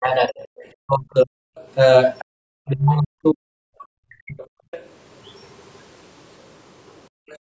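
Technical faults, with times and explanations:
0.0–1.33 s, 2.26–4.61 s and 7.41–7.46 s, speech suppressed in double talk: the talker's level repeatedly sinks by roughly 40 dB, over about one second in the first span, about one and a half seconds in the second, and only a brief 50 ms at the very end. This is likely an echo canceller that could not tell the talker from overlapping far-end audio and pulled both down. On a spectrogram the harmonic stripes fade or break into gaps, and the waveform envelope collapses in chunks.
0.4–0.66 s, 2.19–2.25 s, 4.71–4.84 s and 7.29–7.38 s, other side's voice leaking through: short scraps of a second voice sit under the talker, about 25 dB down in the first two, about 20 dB in the third and about 30 dB in the last. The likely source is loudspeaker playback that the echo canceller left partly in the microphone signal. A spectrogram shows faint, fragmented harmonic traces unrelated to the main voice, and the waveform shows a low ripple.
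7.09–7.13 s, background gated by the echo canceller: the room sound drops by about 40 dB for around 40 ms and then returns. The canceller clamped the microphone hard while the loudspeaker was active, briefly silencing the ambience instead of just removing echo. On the waveform the noise floor shows a sudden notch. On the spectrogram a narrow vertical gap cuts through the background texture, within a band that already ends at 8 kHz.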